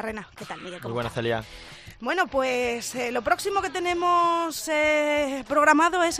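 No technical faults can be heard anywhere in the clip.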